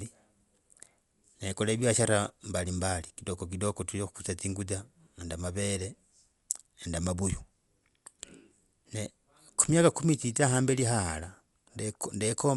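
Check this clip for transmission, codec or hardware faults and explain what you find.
The speech shows one codec fault, present throughout. Dolby Digital compression, across the whole clip, is the likely cause: the encoder discards everything above 11.5 kHz and leaves many frequency lines without mantissa bits, filled with noise on decoding. That fits a bitrate near 64 kbps. The result is plainly audible dullness with a rough, fluttering grain around tonal parts.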